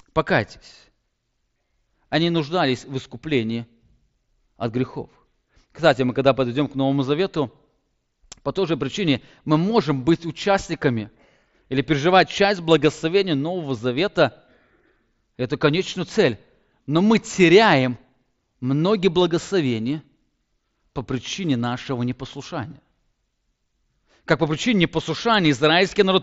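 Nothing stood out on listening to this speech, which comes over a Bluetooth mSBC headset link.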